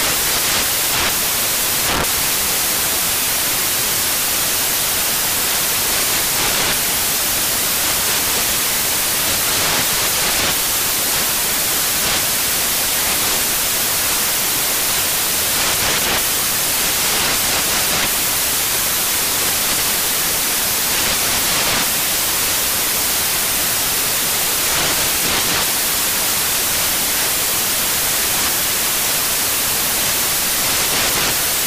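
From start to finish the audio carries loud, harsh broadband noise. These are samples built from the wrong bytes: each value is assembled misaligned or in swapped order, so the rapidly changing low bits land in the most significant positions.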